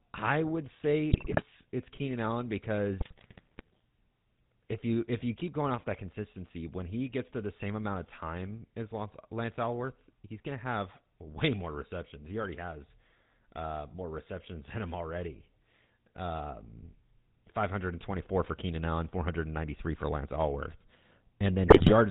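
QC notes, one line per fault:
Throughout: GSM full-rate codec. The speech runs through the original GSM full-rate coder, whose sound fits a 13 kbps stream, and the damage is plainly audible. The coder rebuilds the voice from a vocal-tract filter excited by a sparse pulse train that keeps only one excitation sample in three, so voiced sounds take on a buzzy, gravelly roughness. Nothing above 4 kHz survives, leaving sibilants dull and the overall band narrow.
1.12–1.42 s, 3.00–3.81 s, 21.68–21.92 s: GSM bit errors. Right after "I would say", then again around 3 s and near the end, the decoded speech breaks into squawks, pops and gargling. Corrupted bits are reaching the decoder, which points to an error rate of about 8 percent in the first burst, about 7 percent in the last, and about 2 percent in the longer middle one. Damaged filter, pitch and gain parameters warp the spectrum or spike the level frame by frame.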